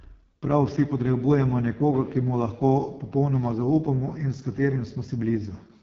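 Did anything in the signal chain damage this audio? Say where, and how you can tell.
Yes, at the codec stage: the AMR wideband (HD Voice) codec runs throughout. The speech is raspy and rough, which fits the codec's lowest rate. Content stops at 7.2 kHz rather than narrowband's 3.4 kHz.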